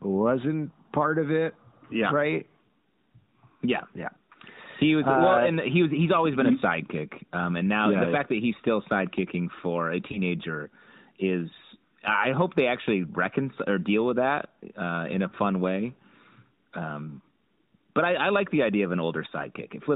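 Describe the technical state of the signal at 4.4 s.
At 4.4 s the speech is intact, with no fault present, and the band limit of the AMR narrowband mobile codec it passes through can be heard as nothing above 4 kHz.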